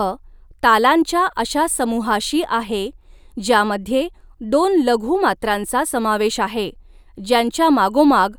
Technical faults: none

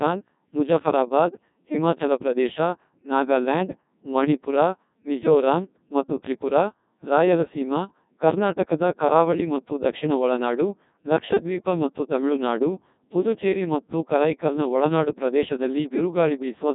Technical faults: Codec 2 vocoder

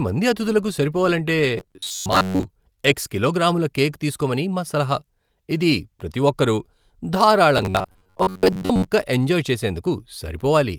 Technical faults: robotic sound from repeated short buffers

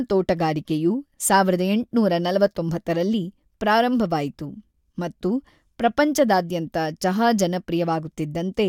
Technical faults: none

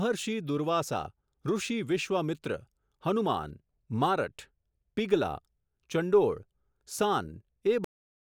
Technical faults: cut-off end

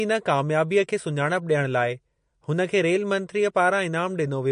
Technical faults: MP3 compression

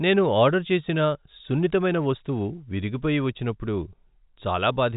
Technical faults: none

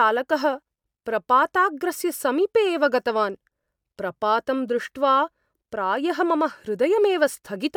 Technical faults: none

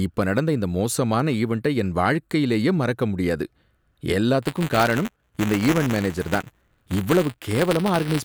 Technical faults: buffer tearing

